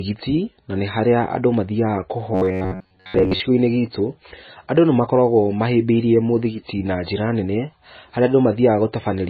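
Right from the start the whole clip sounds dull and watery, and the sibilants swirl and chirp. That's likely heavy MP3 compression, with the encoder chopping treble and dropping weak detail, which fits a starved bitrate somewhere near 18 kbps.

From 2.34 to 3.4 s the speech turns into a stiff metallic buzz around 94 Hz while still loosely tracking the talking. That's robotic sound from repeated short buffers: most of that stretch is the same tiny slice replayed, which fits roughly 10.7 ms buffers.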